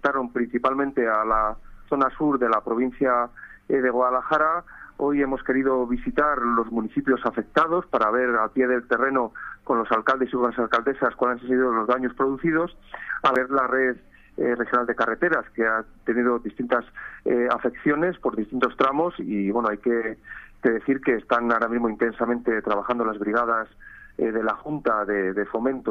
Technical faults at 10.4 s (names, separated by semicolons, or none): none